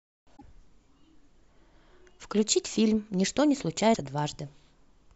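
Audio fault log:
0.33–0.42 s and 3.91–3.97 s, damaged data in a compressed stream: corrupted bytes make the decoder misread frames and lose sync, giving two brief glitches in the speech.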